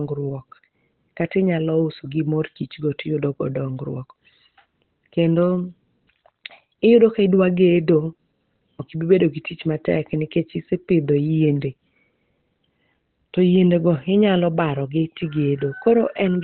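Throughout, the speech sounds muffled and hoarse with nothing above 4.1 kHz, likely heavy Opus compression in its narrowband speech mode at a low bitrate.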